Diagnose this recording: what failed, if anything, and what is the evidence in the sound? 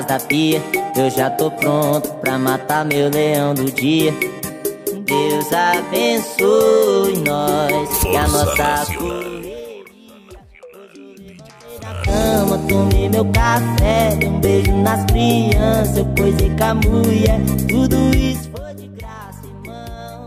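Zipper noise runs from 11.63 to 12.14 s. A level change of roughly 25 dB happens in 1 dB jumps, around forty a second, so there's a fast ticking on the sound. It looks like gain gets updated per buffer with no smoothing.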